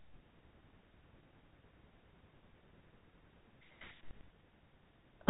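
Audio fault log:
No faults detected.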